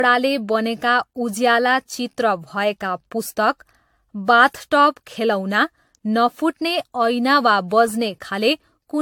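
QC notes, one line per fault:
throughout: generation loss. Speech sounds swirly, hollow and smeared, onsets blur, nothing above 19.2 kHz. Likely from roughly seven lossy re-encodes stacking their artefacts.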